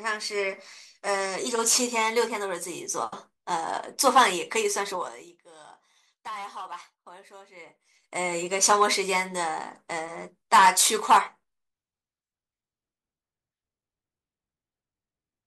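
From 4.92 to 5.39 s the speech drops by roughly 20 dB under a fast ticking, and from 7.52 to 8.17 s it climbs back by about 20 dB with a slower tick. This is zipper noise. The gain moves in unsmoothed 3 dB jumps, around fifteen per second going down and about ten per second coming up. Each abrupt jump puts a small discontinuity into the waveform, and the run of them forms the zipping texture.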